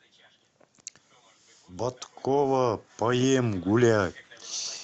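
A speech recording passed through a call's microphone processing, with its spectrogram empty above 8 kHz, shows automatic gain rising from 1.66 to 4.23 s: the gain control judged the input too quiet and lifted it by about 9 dB, so voice and background swell together. The waveform envelope grows steadily across that span, and the spectrogram brightens evenly at all frequencies.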